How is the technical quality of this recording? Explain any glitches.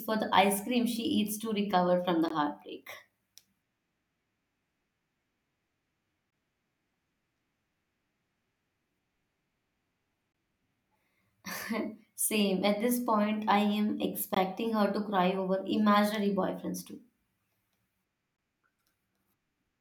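The recording has one recurring glitch, a gap between chunks, at 2.28–2.30 s (after "to recover from the"), 6.30–6.32 s, 10.32–10.34 s, 14.34–14.36 s (between "this point I am" and "her to cry over") and 18.36–18.38 s. The speech was handled in 4-second chunks, and each join left 20 ms of silence. Nothing is lost, but every 4 seconds the speech drops into a brief hole.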